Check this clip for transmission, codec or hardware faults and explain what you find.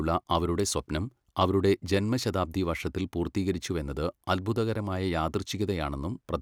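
Checking the clip turns up no faults to explain.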